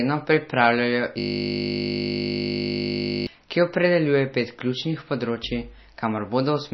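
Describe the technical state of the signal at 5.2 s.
At 5.2 s the signal shows the same damage it carries throughout: likely MP3 compression at a starved bitrate, one that fits roughly 27 kbps. Short of bits, the encoder has cut the treble flat at 5.9 kHz and dropped weak frequency lines that then flicker in and out between frames. The speech sounds dull and watery, with a swirly, metallic edge on s sounds and softened, smeared consonant attacks.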